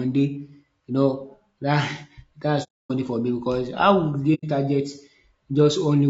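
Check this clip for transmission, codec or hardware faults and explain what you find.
Two codec faults are present: coding damage throughout the speech, and two silent gaps.

Throughout, the voice sounds rough and grainy, with noise filling the spaces between harmonics and a thin, artificial top band, plainly audible. This is likely low-delay AAC compression at a low bitrate, roughly 32 kbps. The short transform frames resolve pitch harmonics poorly, unlike ordinary AAC's smoother, duller loss.

AAC frame loss with muting occurs from 2.63 to 2.92 s, a 270 ms hole ending just before "for me because how", and again from 4.34 to 4.44 s, lasting 90 ms. The decoder zeroed the missing spectra, so overlapping windows fade the sound out and back in. This sets it apart from hard dropouts, and from concealment that would fill the gap.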